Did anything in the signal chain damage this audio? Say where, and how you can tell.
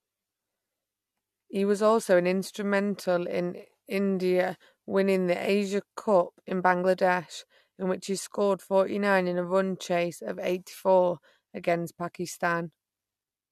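No, nothing in the signal chain stood out as damaging this speech recording on listening.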